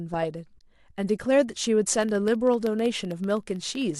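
At about 0.59 s there's a short, soft-edged gap in the speech, roughly 20 ms long, which fits two lost frames. That's AAC frame loss with muting. When the decoder had nothing to play for those frames, it zeroed their spectrum, and the overlapping windows faded the sound down and back up instead of chopping it. So you hear a brief dip or hole.

From about 1.96 s to 3.95 s there's a steady run of tiny ticks, one every 64 ms, around thirty of them in all. These are periodic USB or driver dropouts. Something blocked the audio path at a fixed interval, and each time a sliver of signal, on the order of a tenth of a millisecond, was replaced with silence. The clockwork regularity is what gives it away, and the ticks only show up where there's speech underneath.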